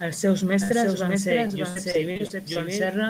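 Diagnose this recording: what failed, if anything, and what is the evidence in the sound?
A doubled audio track runs throughout: a full-band copy of the speech trails by roughly 0.7 s, about 5 dB quieter. Unlike acoustic echo or reverb, it carries no decay or room colour. The likely cause is a second, slower capture path or an edit leaving two copies out of step.

A burst of packet loss at the network stage hits from 0.63 to 0.71 s, just before "van ser". The receiver stretches the last sound for about 60 ms, fading it into a held buzz or hiss, then resumes with roughly 60 ms of audio gone. It is a single contained gap, not a recurring pattern.

Repeated packet loss (robotic sound), also a network fault, covers 1.47 to 2.57 s, right after "van ser". Seven separate holes, the longest about 57 ms, are each patched by extending the previous sound, making the speech choppy. The repetition across the span distinguishes it from the single burst earlier.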